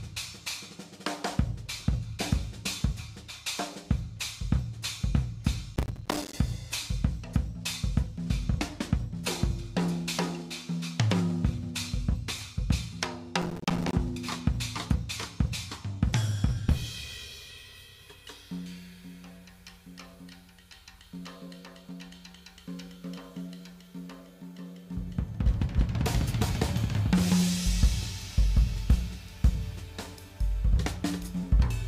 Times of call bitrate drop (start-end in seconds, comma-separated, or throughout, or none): none